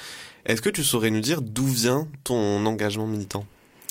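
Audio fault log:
1.24–1.26 s, loud pop: a sudden voltage pulse, likely from a plug, switch, static discharge or driver glitch, entered the signal chain. The circuitry after it shaped it into one sharp pop, about 5 dB above the speech, which carries on underneath.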